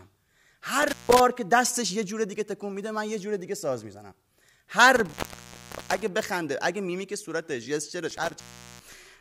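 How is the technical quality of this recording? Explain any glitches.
The speech is interrupted three times by intermittent contact: at 0.82–1.20 s (about 160 ms open), 4.96–6.08 s (about 770 ms) and 8.10–9.05 s (about 400 ms). A loose cable or plug momentarily breaks the signal path, so the sound drops out with crackle at each edge and faint hiss during the gap.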